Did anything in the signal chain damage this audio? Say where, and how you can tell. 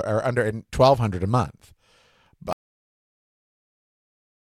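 Yes. An audio dropout to silence cuts the speech abruptly at 2.53 s into silence, with no room tone, likely from a lost input device or link, unlike a noise gate or fade.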